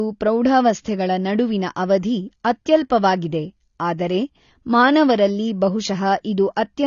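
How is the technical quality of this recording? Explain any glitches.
The recording is limited by plainly audible lossy coding, with one brief smearing glitch.

AAC compression runs throughout the speech. The likely cause is AAC-LC at a low bitrate, consistent with about 24 kbps, where the encoder has too few bits for all frequency lines. Nothing remains above 7 kHz, so the sound is dull, and the coding damage is plainly audible as smearing and warble.

Pre-echo occurs at 3.98 s. The transform coder spreads its quantisation noise across the whole block, so noise sized for a sharp attack also fills the quiet moment before it. This is heard as a short hiss about 12 ms ahead of the onset, which then sounds softened.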